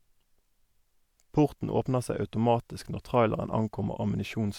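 Nothing stood out on listening to this speech recording.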